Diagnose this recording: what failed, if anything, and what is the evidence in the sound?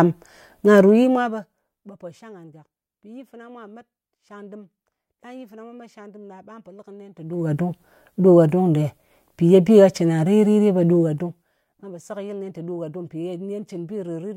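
Zipper noise in the gain stage. Stepped level changes tick at 0.79–1.95 s before "pò shang", 7.11–7.52 s, and 10.89–11.87 s before "po sekɨyɨl". Unsmoothed gain jumps, each one a click.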